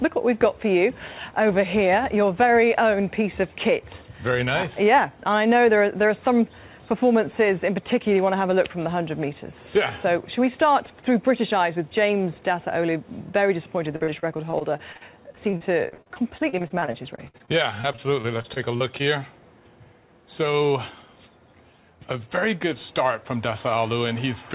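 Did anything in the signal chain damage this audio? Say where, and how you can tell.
Yes, at the network stage. From 13.96 to 19.02 s there is repeated packet loss (robotic sound): dozens of short holes, the longest about 59 ms, each patched by stretching the preceding sound. Roughly a fifth of that span is concealment, hence the choppy sound with pieces missing.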